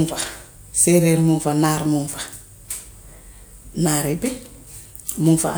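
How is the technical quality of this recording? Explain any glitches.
Nothing in this recording needs explaining: the speech runs along steady and unbroken, with no glitches anywhere in it.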